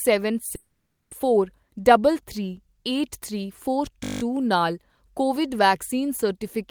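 At 0.55 s the speech breaks off until 1.13 s. The last sound trails into a brief fading hiss, then near silence for about 0.47 s. Roughly 0.56 s of audio never returns. This is likely a long network dropout, with the receiver filling the gap.

From 4.04 to 4.22 s comes a system hang loop. A 20 ms slice repeats exactly, nine times. The hardware kept replaying its ring buffer while the system froze. At 50 repeats per second it sounds like a steady buzz. Essentially no speech is lost.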